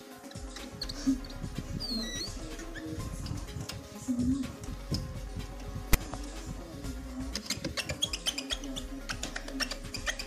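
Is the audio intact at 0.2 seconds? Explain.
Yes, at 0.2 s the audio is intact, with no dropout, click, distortion or other fault to be heard at that moment.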